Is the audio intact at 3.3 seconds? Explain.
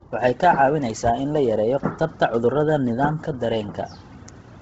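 No. At 3.3 seconds the speech is still under the Bluetooth LC3 compression that runs through the whole clip, likely a very low-bitrate LE Audio link, around 16 kbps with 10 ms frames. The codec discards and noise-fills the upper spectrum, leaving nothing above 7.8 kHz and a breathy, grainy edge on the voice.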